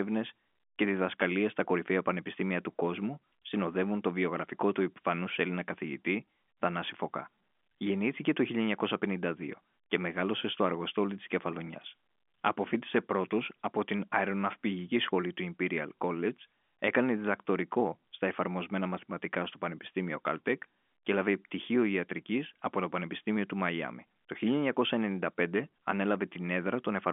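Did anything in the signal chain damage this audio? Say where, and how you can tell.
No, the speech shows only the expected effects of a G.711 A-law telephone path, with a line band of about 250 Hz to 3.5 kHz, nothing above about 3.7 kHz, and coding noise at most faint, which fits a 64 kbps fixed-line channel.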